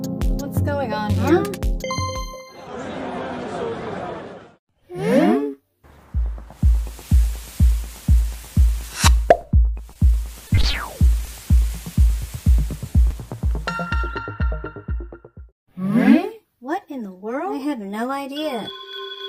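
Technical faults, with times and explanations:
9.93 s and 12.90 s: short concealed packet loss. At each point about 20 ms of the stream failed to arrive in time for decoding, so the receiver synthesised a 20 ms patch by extending the preceding signal, following its pitch where voiced and substituting shaped noise where not, before crossfading back into real audio. Because each patch is so short, it registers as a brief smear or wobble, and a short transient falling inside it can drop out.
10.47–10.75 s: repeated packet loss (robotic sound). Across this 0.28 s stretch four separate gaps occurred, none longer than 20 ms, with about 80 ms of concealment in total, roughly 29% of the span. Each patch continues the last sound, and the next loss arrives before the signal settles, so the passage comes out choppy, with fragments missing.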